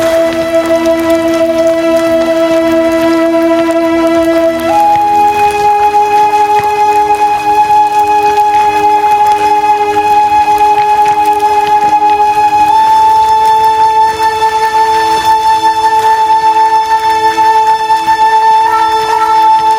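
Sounds with gain pumping throughout: gain likely set far too high drives a fast limiter to duck the background about 5 dB under each loud sound, letting it swell back between them.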